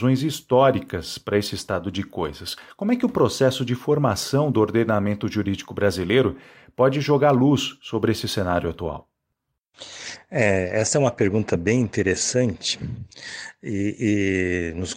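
No technical faults can be heard anywhere in the recording.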